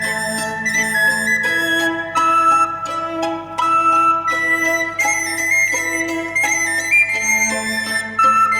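Mains hum runs under the whole clip from the first second to the last: a steady low tone at 50 Hz, sitting roughly 30 dB below the sound itself. Power-line current has leaked into the signal path, typically through a ground loop or a nearby transformer. Unlike rumble or handling noise, which are broadband and shift over time, this hum is a fixed pitch that never wavers, with some low harmonics stacked above the 50 Hz fundamental.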